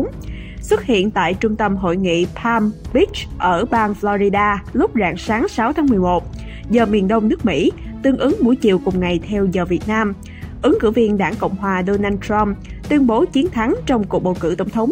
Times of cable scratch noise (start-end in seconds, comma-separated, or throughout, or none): none